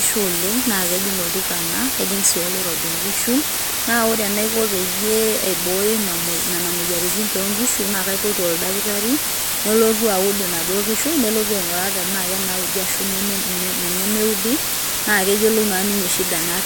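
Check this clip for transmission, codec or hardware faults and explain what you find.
One fault runs through the whole clip. A constant, even hiss sits at roughly the same level as the speech, with no distortion: low bit depth with dither, only 3 bits, dither turning rounding error into steady white noise.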